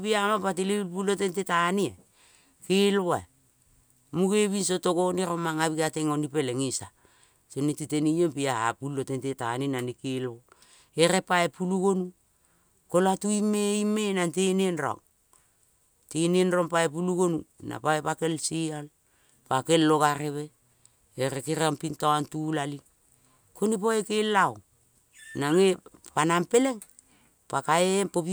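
No technical faults can be heard anywhere in this recording.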